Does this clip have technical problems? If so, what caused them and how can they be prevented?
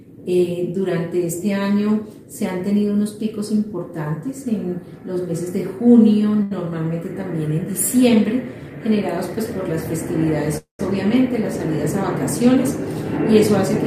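Yes. Short stall from a late packet, 6.42 to 6.52 s: one packet missed its slot, so the receiver held the last sound for about 85 ms, then resumed without losing anything. A slightly deeper jitter buffer would absorb a delay of this size.

Call audio freeze, 10.58 to 10.80 s: the sound stretches into a fading fill and then about 130 ms of silence, 215 ms in all, before continuing with nothing missing, likely because packets were held up until the jitter buffer ran empty. Reducing network congestion, or prioritising the call's traffic, would keep packets arriving on time.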